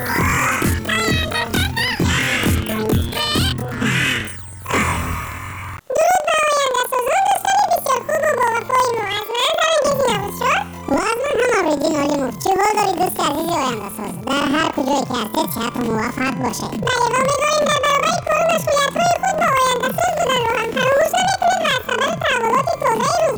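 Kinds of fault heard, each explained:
Planar audio read as interleaved: each block stores all left-channel samples followed by all right-channel samples, but playback treats the data as alternating left-right pairs. Each block of about 46.4 ms, which fits a 2048-sample block, is squeezed into half its time and played twice, left content and then right. Throughout the clip the sound sits an octave high, with a flutter at about 21.5 Hz from the block boundaries, while the overall pace stays correct.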